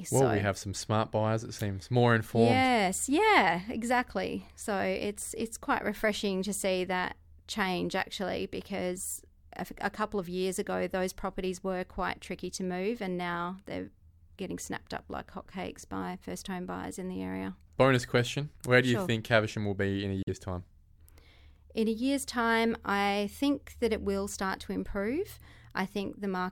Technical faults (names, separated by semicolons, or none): Bluetooth dropout